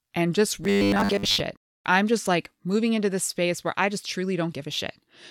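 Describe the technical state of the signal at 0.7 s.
Robotic sound from repeated short buffers covers 0.64 to 1.41 s, after "and just": audio likely arrived too seldom, so roughly 10 ms chunks repeat, forcing a metallic 100 Hz buzz until "I'm just like moving".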